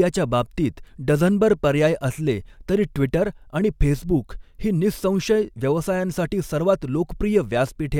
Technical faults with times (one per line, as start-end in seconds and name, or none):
none